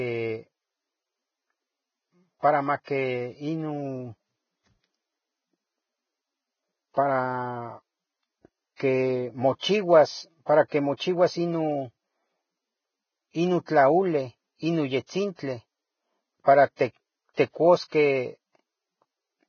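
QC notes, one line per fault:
throughout: Vorbis compression is the likely cause of the grainy, hissy treble and smeared consonant attacks in this speech. Nothing sounds above 6.6 kHz, and fine detail below that turns to noise, which fits a bitrate near 15 kbps. A simple low-pass would sound dull but clean.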